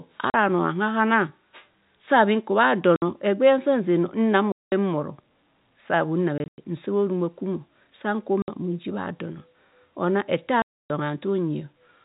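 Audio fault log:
0.30–0.34 s, 2.96–3.02 s, 4.52–4.72 s (after "nsa nze no nang"), 6.38–6.58 s (broken gaps after "sa bhunn"), 8.42–8.48 s, 10.62–10.90 s, packet loss filled with silence: the speech drops into dead silence for 40 to 280 ms, every gap a multiple of 20 ms, which points to 20 ms packets. Unlike concealed loss, nothing is smeared, faded or repeated across the gaps, and the narrowband telephone sound around them stays intact.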